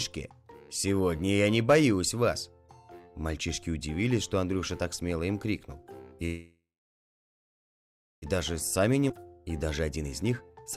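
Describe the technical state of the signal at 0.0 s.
At 0.0 s the signal is intact, with no technical fault present at that moment.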